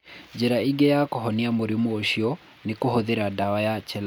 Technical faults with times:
none

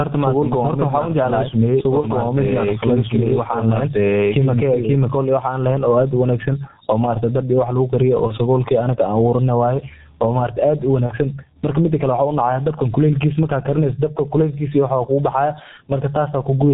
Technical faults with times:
0.00-16.73 gain pumping
0.00-16.73 G.723.1 codec
0.00-4.94 doubled audio track
2.00-2.07 VoIP packet loss concealed by the speech codec
8.27-8.37 VoIP packet loss concealed by the speech codec
11.06-11.14 VoIP packet loss concealed by the speech codec

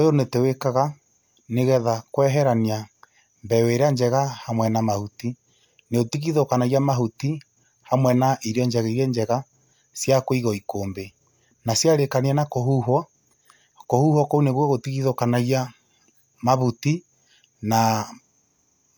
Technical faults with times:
none

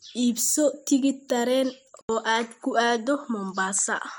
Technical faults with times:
2.01-4.18 input switched to a poorer device

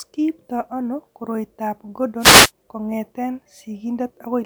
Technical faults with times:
2.19-2.51 wireless microphone noise hit

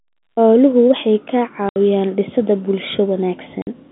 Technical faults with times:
1.69-1.76 packet loss filled with silence
3.62-3.67 packet loss filled with silence

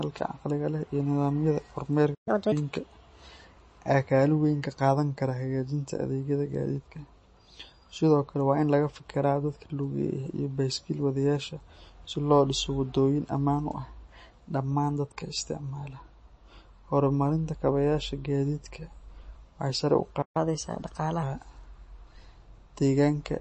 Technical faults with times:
0.00-23.41 MP3 compression
2.14-2.28 playback stall
2.28-2.52 catch-up at higher speed
20.22-20.37 playback stall
20.37-21.23 catch-up at higher speed

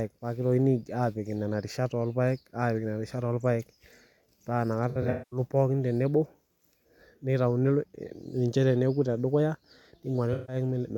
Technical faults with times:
4.89-5.39 AAC frame loss with concealment
10.33-10.55 AAC frame loss with concealment

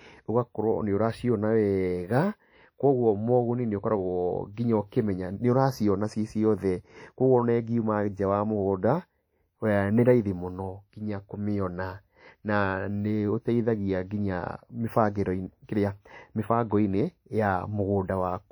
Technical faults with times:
0.00-18.52 WMA compression

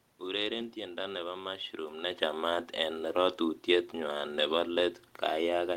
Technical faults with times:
none

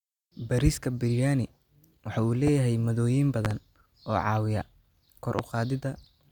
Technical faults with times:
2.47-2.50 loud pop
3.45-3.54 loud pop
5.39-5.42 loud pop

